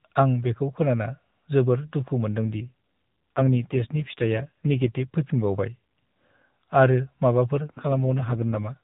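After "बेखौ खोनाना जोबोर दुखु", from 2.48 to 5.07 s and again from 7.77 to 8.78 s, an AMR rate drop makes the speech rougher and more synthetic, with no gap and the band still capped near 4 kHz. This points to the codec stepping down from 12.2 to roughly 5.9 kbps.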